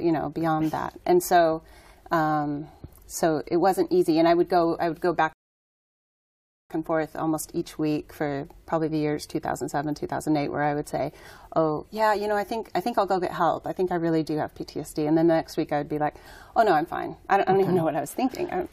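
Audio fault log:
5.33–6.70 s, rebuffering stall: the audio drops to silence for about 1.37 s, then picks up exactly where it broke off, with nothing skipped. The player used up its downloaded audio and paused until more arrived, so time is added rather than lost.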